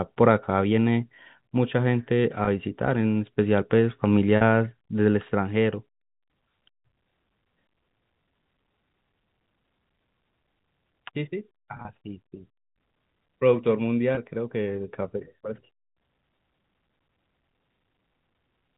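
At 2.45 to 2.47 s, 4.37 to 4.41 s, 11.77 to 11.85 s and 14.15 to 14.17 s there is packet loss with pitch repetition. The gaps total 20, 40, 60 and 20 ms, which fits 10 ms packets. The receiver fills each gap by repeating the last pitch period, so each one sounds like a brief held, buzzy note. At 11.77 s the losses are scattered over 80 ms, with no run longer than 30 ms. The G.711 telephone band is audible throughout.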